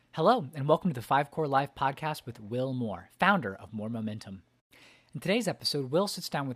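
A speech recording with no audible technical faults anywhere in the signal.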